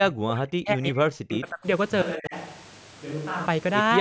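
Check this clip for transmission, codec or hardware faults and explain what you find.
Two kinds of fault are present: speech suppressed in double talk, and a switch to a distant microphone.

Speech suppressed in double talk occurs from 0.0 to 1.66 s, and again briefly from 2.15 to 2.35 s. The likely cause is an echo canceller that heard both sides at once. It could not tell this talker from the loudspeaker echo, so it cut both. In the first stretch, the speech is pushed down for most of the span, dropping by up to about 40 dB. The second dip is shallower, about 15 dB.

A switch to a distant microphone runs from 2.02 to 3.47 s. The change is abrupt at both ends. The speech suddenly turns roomy and hollow and loses bass. It is about 5 dB quieter. Room noise rises to about 25 dB below the speech. This likely means the close microphone dropped out and a farther one took over. The short suppression dip falls inside this stretch. 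Throughout the clip, nothing is heard above 8 kHz, consistent with call microphone processing.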